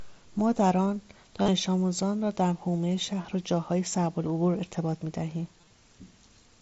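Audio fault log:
1.42–1.48 s, 3.23 s, 4.30 s, 5.61–5.70 s: concealed Bluetooth headset packet loss. The two longer gaps have a brief buzzy held tone and a slight warble as real sound resumes; the single one at 4.30 s is nearly hidden. Lost headset packets were filled by repeating recent waveform, with runs up to 37.5 ms.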